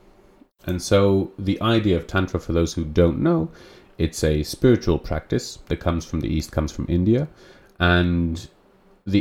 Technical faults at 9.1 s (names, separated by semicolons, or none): none